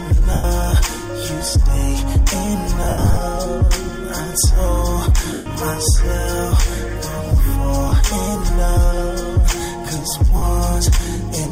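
Lost LE Audio frames break up the sound at 0.33–0.44, 2.83–3.17 (patchy gaps, longest around a tenth of a second), 5.33–5.46, 7.89–7.92 and 10.37–10.42 s. Each dropout turns into a brief noisy smear as the decoder patches over the missing audio. Light lossy compression is also present.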